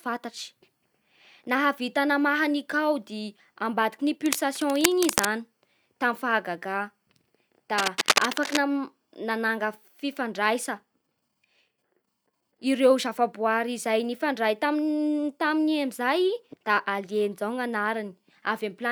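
From 4.26 to 5.29 s, and again from 7.78 to 8.65 s, dense, uneven bursts of scratching and rustling sit over the speech. This is cable scratch noise, most likely from a worn cable or connector being handled so its contact resistance jumps about rapidly. The first burst is a little below the speech level, and the second is about as loud as it. Unlike steady crackle or isolated clicks, each burst is a tight, irregular cluster that starts and stops with the movement.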